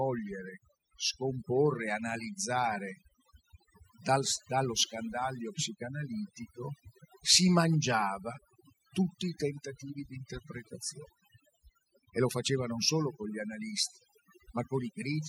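Right through the speech there's overdone noise removal: the noise reducer was pushed so hard that any frequency band sitting near its noise estimate gets clamped down. The gaps fall to near silence with little twinkling specks, and quiet parts of the voice go with them.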